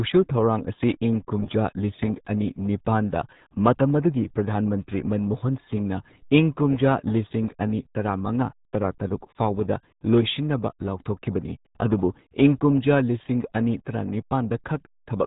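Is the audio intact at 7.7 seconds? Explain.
No. The RealAudio 14.4 codec covers the whole clip, 7.7 s included. Its dial-up-rate coding removes everything above 3.8 kHz, leaving the speech muffled and gargly.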